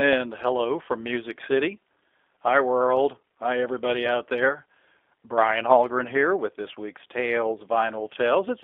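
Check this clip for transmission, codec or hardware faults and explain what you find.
One fault is present, running through the whole clip: G.729 codec coding. The speech is rebuilt from a vocal tract filter, a pitch predictor and a few pulses per frame, which fits an 8 kbit/s G.729A link. The band runs only from 300 Hz to 3.5 kHz, so the sound is thin and dull, with a plainly audible rough, synthetic edge.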